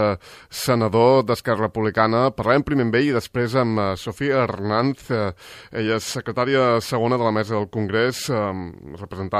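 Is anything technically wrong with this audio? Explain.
No, nothing technically wrong can be heard here.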